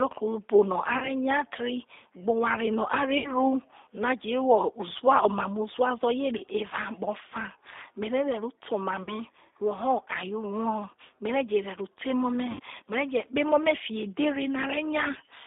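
Throughout the clip, the speech carries the sound of the G.729 codec at 8 kbit/s. The line is band-limited to roughly 250 Hz to 3.7 kHz, so the top and bottom of the voice are gone. The codec rebuilds each frame from a filter, a pitch predictor and a few pulses. That leaves the voice plainly rough and slightly synthetic.

Packet loss concealed by the speech codec breaks in five times. Packets are lost from 0.98 to 1.10 s (40 ms lost), 3.18 to 3.30 s (60 ms), 6.38 to 6.43 s (20 ms), 9.03 to 9.13 s (40 ms) and 12.51 to 12.61 s (80 ms). The decoder fills each gap by stretching its last pitch and filter, and the level sinks frame by frame. Each gap turns into a buzzy tone or coloured noise that fades. Then it recovers, weak at first. The longest gap, near 12.5 s, fits four lost packets.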